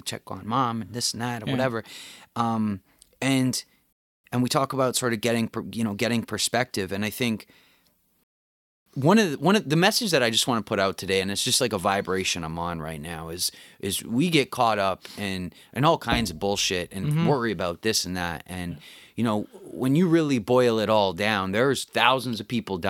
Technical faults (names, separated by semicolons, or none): rebuffering stall